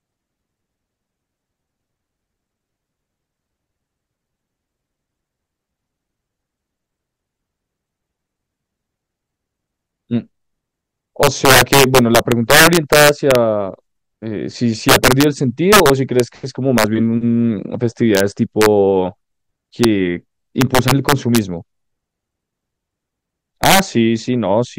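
Integer overflow runs through the whole recording. The speech arrives about 6 dB too hot for the integer format. Instead of being limited at full scale, each peak that crosses the ceiling wraps around to the opposite extreme, so the waveform jumps across the entire range in one sample. Well under one percent of samples are affected, but each peak over the limit becomes a violent, snapping crack, far harsher than ordinary clipping distortion.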